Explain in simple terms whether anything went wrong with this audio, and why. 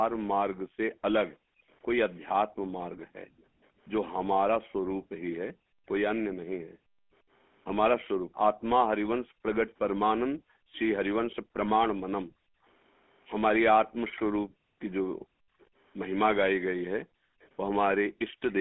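Several things went wrong, and they are different kinds of trouble.

The whole 19-second recording carries the sound of the GSM full-rate codec, the early mobile-phone coding. Everything above about 3.4 kHz is gone, and the speech has a buzzy, gravelly roughness throughout, rather than coming and going like the other two problems.

Background gated by the echo canceller: between 0.57 and 12.65 s, and again between 14.44 and 18.41 s, the room sound behind the speaker dips almost to silence and then returns. It adds up to about four seconds in the first stretch and about a second and a half in the second. The speech itself is not repeated here. Only the quiet background vanishes.

Echo leak: a faint, delayed copy of the speech can be heard very briefly at 1.28 to 1.34 s, then more clearly from 13.85 to 15.66 s, and faintly again from 17.4 to 18.53 s. It trails the original by about a third of a second each time, most likely because a loudspeaker on the other end was picked up again. 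Unlike the gating, this adds sound instead of removing it.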